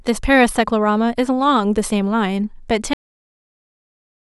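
At about 2.93 s the speech just stops dead, a cut-off end. The final buffers never got written out, so the sound is chopped mid-utterance and drops straight into digital silence with no natural decay, staying flat silent through to the end.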